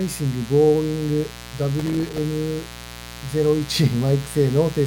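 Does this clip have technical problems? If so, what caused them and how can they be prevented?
Yes. A mains buzz runs through the whole clip: a dimmer, rectifier or unshielded cable is letting sharp switching spikes into the signal path twice per cycle of 60 Hz mains. Those spikes carry a long series of 60 Hz harmonics reaching up to several kHz, so instead of a smooth hum there is a steady, raspy buzz sitting roughly 15 dB below the sound. Prevent it by keeping audio cables away from dimmers and power supplies, using shielded balanced connections, and fixing ground loops.

From 1.79 to 2.18 s there is processor overload crackle: the processor fell behind and repeatedly missed its deadlines for very short audio buffers, and each time it replayed a scrap of old audio instead of fresh material. The buffers were about 3 ms long, and about 20 of them were missed. The hard-edged repeats pile up into a gritty tearing laid over the sound, which stops once the load eases. 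Prevent it by raising the buffer size or closing other demanding processes during recording.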